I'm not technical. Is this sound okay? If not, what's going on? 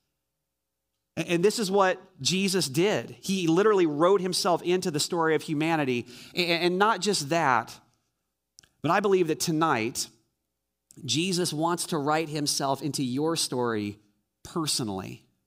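No. From 7.57 to 8.18 s the speech slows and drops a semitone, and from 11.41 to 13.75 s it speeds up and rises. Each shift jumps in, holds steady and snaps back, which sets it apart from wavering tape-style wobble. This is likely a drift correction step.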